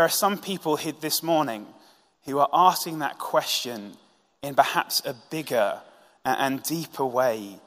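Speech recording with no technical faults to report.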